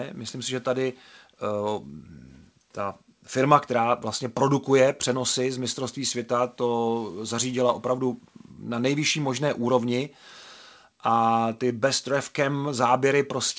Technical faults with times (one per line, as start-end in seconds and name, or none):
none